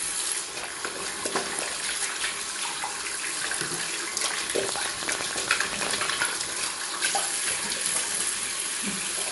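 A recording of everyday sounds carries MP3 compression throughout. Nothing survives above 11.3 kHz, and weak detail flickers in and out with a watery, swirly quality. These traits, together with smeared attacks, point to a bitrate of about 46 kbps. A simple low-pass filter would dull the top without that frame-to-frame shimmer, so the shimmer is what marks a starved perceptual encoder as the likely source. From 4.69 to 6.06 s a train of clicks rides over the sound. There are around fifteen similar pulses at about 10.3 per second, spaced unevenly and peaking around 15 dB above the material. Their matching shape and steady density separate them from random crackle or dropouts. Interference from nearby equipment or a faulty connection or power supply is the likely cause.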